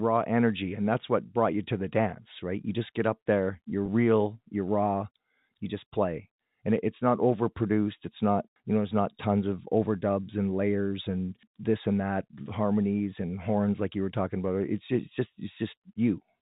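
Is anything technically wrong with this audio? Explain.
Yes. From 3.86 to 3.88 s, just after "there you're" and before "real you're raw you", the speech briefly freezes into a slightly held, buzzy tone before continuing. This is packet loss with pitch repetition. About 20 ms of audio went missing, which fits a single lost packet. The receiver bridged the hole by looping the last pitch period, which produces the momentary sustained buzz. Because the gap is so short, the speech resumes almost immediately. The narrow telephone band of the G.711 coding is audible throughout.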